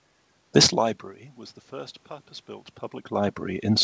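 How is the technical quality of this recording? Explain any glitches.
No technical glitches can be heard in this recording.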